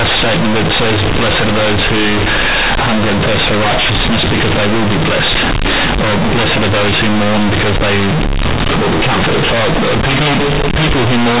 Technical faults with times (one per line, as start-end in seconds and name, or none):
0.00-11.40 companded audio read as linear